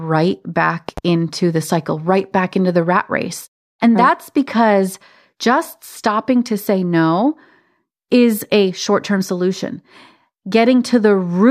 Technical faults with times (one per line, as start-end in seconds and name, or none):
0.89-1.00 loud pop